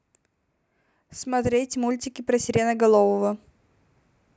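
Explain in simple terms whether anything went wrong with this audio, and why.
Something did go wrong here. From about 0.99 s to 3.42 s, the speech and the background noise get louder together, slowly and steadily. This is automatic gain rising. The recording system decided the sound coming in was too quiet. So it turned its own volume up, bit by bit, over more than two seconds. It can't boost only the voice, so the room noise grows right along with it.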